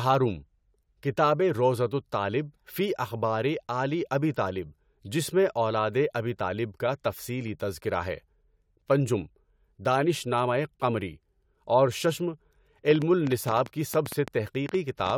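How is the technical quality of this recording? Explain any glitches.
There's one real glitch here, near the end of the speech: a train of clicks from 12.91 s to 15.11 s. It's a run of roughly fifteen sharp, similar-sounding pops at about 7.3 per second, spaced unevenly, and they stick out well above the speech, around 10 dB over it. They tick away through the gaps as well as over the talking, so they're riding on top of the audio, not part of it. That pattern likely comes from a faulty connection or power supply or interference from nearby gear.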